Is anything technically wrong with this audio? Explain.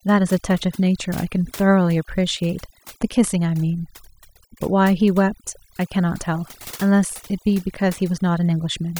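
Yes. The speech clip suffers from overdone noise removal, present from start to finish. A noise reduction stage was set too aggressively on a noisy recording, so any frequency band sitting close to its noise estimate gets pushed far down or cut out entirely, and the softer parts of the voice fall below that line along with the noise. The result is a background of near silence dotted with twinkling specks.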